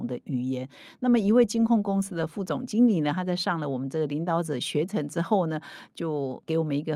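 No technical faults can be heard anywhere in the recording, with the speech signal staying steady and intact throughout.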